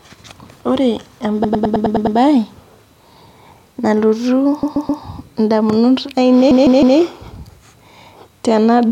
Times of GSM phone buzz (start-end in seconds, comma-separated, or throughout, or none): none